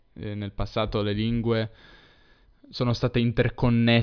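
No faults turn up anywhere in this bit of speech, so there's nothing to flag.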